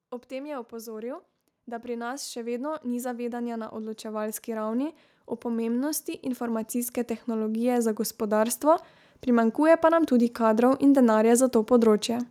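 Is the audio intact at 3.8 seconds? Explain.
No. At 3.8 seconds the speech and the background noise under it are swelling together, part of a slow rise of about 20 dB from 0.28 s to 10.38 s. This is automatic gain rising: the gain control judged the input too quiet and kept raising its gain.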